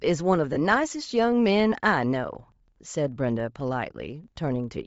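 From the first moment to the end, the speech carries a steady 25 Hz buzz from a filter restarted on every block. Each block starts the filter from silence, so a small transient lands every 40 ms and the ticks get louder and softer with the speech. On a waveform these are evenly spaced spikes at block boundaries. On a spectrogram they form thin vertical lines at a regular 40 ms spacing, strongest where the speech is loud.

Throughout, the speech also sounds plainly grainy and breathy. The upper frequencies have lost their detail and been replaced by a hiss-like texture. This is likely Bluetooth LC3 compression at a low rate, consistent with around 32 kbps and 10 ms frames. Much of the upper spectrum was zeroed and filled with noise. On a spectrogram the high band looks speckled and patchy rather than showing clear harmonic structure, and it changes in 10 ms steps.

From 0.53 to 0.57 s, about 30 ms of audio comes from lost LE Audio frames, roughly three frames' worth. 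The decoder repeated the last spectrum with randomised signs, so the speech turns briefly into a noisy smear instead of a clean sound or a silent gap. On a spectrogram the harmonics blur into a uniform noisy block. The waveform shows irregular, noise-like filler where clean periodic cycles should be.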